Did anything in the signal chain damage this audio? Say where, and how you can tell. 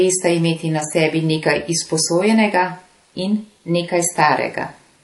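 Yes, at the codec stage. All the way through, this speech has nothing above 11.5 kHz, and two flavours of lossy smear sit on top of each other. That points to transcoding between lossy codecs, likely an MP3 around 48 kbit/s re-encoded as HE-AAC around 32 kbit/s.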